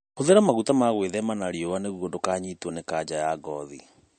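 Throughout the clip the speech has likely passed through heavy MP3 compression, with the encoder starved of bits, which fits a low bitrate of around 40 kbps. To save data it has removed everything above 8.6 kHz, so the sibilants lose their edge and sound dull. Weaker frequency detail drops in and out from frame to frame, giving a plainly audible watery, swirling texture, with brief metallic chirps on s sounds and smeared consonant attacks.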